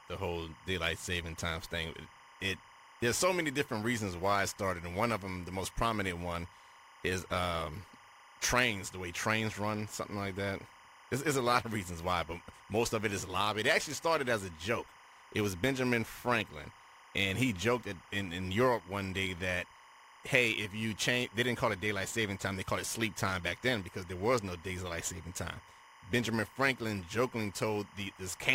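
Speech recording with timecode bleed running the full length: a steady chirping warble sits roughly 25 dB below the speech, flipping between tones near 1 kHz and 2 kHz. That is linear timecode at 25 frames per second leaking in from an adjacent track or cable.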